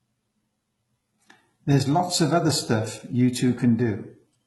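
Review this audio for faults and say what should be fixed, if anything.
Throughout the speech, sibilants sound gritty and metallic, with synthetic treble ending near 11.8 kHz. This is likely HE-AAC compression, consistent with roughly 16 kbps. Prevent it by encoding at a higher bitrate.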